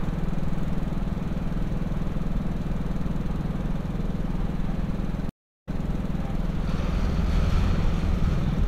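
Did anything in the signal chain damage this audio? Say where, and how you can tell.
Yes. A stream reconnect at the network stage hits between 5.29 and 5.80 s. The audio stops dead for 341 ms, and when it returns it picks up 168 ms earlier than where it broke off, so a short stretch of sound plays twice. That backward jump after a gap shows the connection dropped, the player went quiet while it reconnected, and a fresh decoder restarted from data the server resent.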